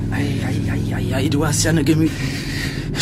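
At 2.03 to 2.07 s there is an abrupt jump forward with a brief blip at the join, as though part of the sound has gone missing. This is likely a stream segment skipped: one chunk of the stream failed to load, and playback resumed from the next one.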